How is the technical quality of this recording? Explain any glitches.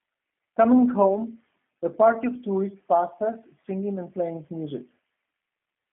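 The recording's quality is limited by plainly audible low-bitrate telephone coding across the entire clip. The G.729 codec affects the whole clip. It does not carry the waveform itself. It models the speech as a short filter shaped like the vocal tract, driven by a pitch estimate and a handful of pulses, which fits an 8 kbit/s stream. Nothing above 3.7 kHz remains, and the band runs from 150 Hz to 3.4 kHz, so the speech sounds muffled and plainly rough and synthetic.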